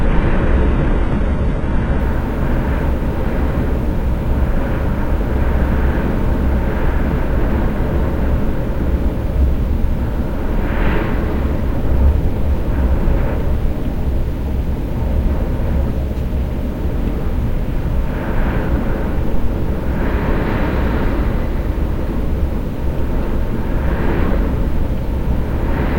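From 0 to 2.0 s the adaptive stream is starting at a low bitrate. Treble sounds synthetic and artefact-laden, which fits a very low-rate HE-AAC start. At 2.0 s quality steps up abruptly to a cutoff near 11.8 kHz without any gap, unlike a dropout.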